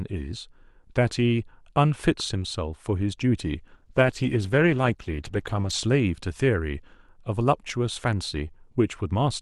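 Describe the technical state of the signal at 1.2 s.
At 1.2 s the speech signal is intact, with no audible dropout, distortion, clipping or other technical fault.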